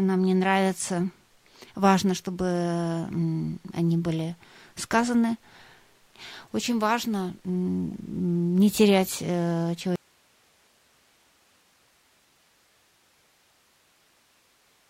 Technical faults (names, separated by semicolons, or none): audio dropout to a faint residue